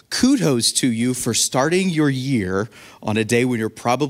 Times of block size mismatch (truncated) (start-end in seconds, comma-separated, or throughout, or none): 2.58-3.39